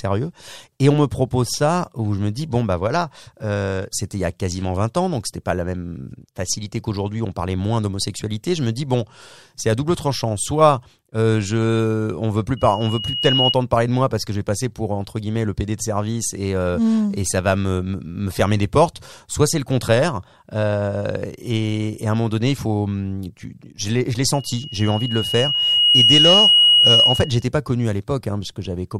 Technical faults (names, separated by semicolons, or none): loudspeaker feedback squeal